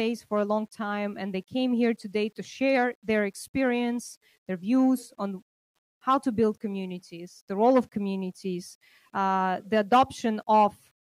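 Throughout the audio, quiet passages turn grainy with error that tracks the signal, roughly 45 dB below it, likely from low bit depth without dither, rounded to 10 bits.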